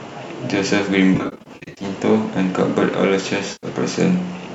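AAC frame loss with concealment strikes twice, most likely in a low-delay AAC stream. From 1.15 to 1.85 s, about 420 ms of audio drops out in short bursts, none much beyond a few hundredths of a second, which the decoder patches from the last good spectrum, leaving a smeared, noisy, phasey stretch. At 3.52 to 3.67 s, about 110 ms of lost audio blurs the same way.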